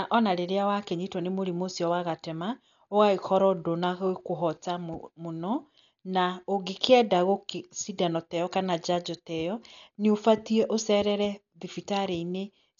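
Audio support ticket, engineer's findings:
Likely Dolby Digital compression at a very low bitrate, which fits roughly 48 kbps: encoder narrowed the band and dropped mantissa bits on many frequency lines. Speech dull, heavy codec damage, nothing above 6.9 kHz, rough, fluttering dither noise around tones, throughout.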